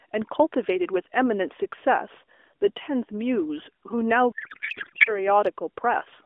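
From 4.32 to 5.29 s the speech gives way to garbled noise and warble that barely tracks it: a codec payload misread, octet-aligned AMR frames decoded as bandwidth-efficient. Unlike dropouts or concealment, the frames keep arriving but their fields land in the wrong places. Around it, the narrowband AMR path sounds lightly coded.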